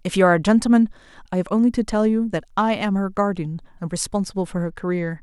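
From 4.64 s to the end of the speech, about 0.6 s, there is a Bluetooth SBC bit pool drop. Congestion on the wireless link forced the encoder to spend far fewer bits per frame, enough to suggest a fall from a bit pool of around 31 to around 14, near 99 kbps. The top sub-bands are starved, so the treble turns dull, and coarse quantisation in the rest adds a gritty hiss. On a spectrogram the upper band thins abruptly and grainy noise speckles the remaining energy.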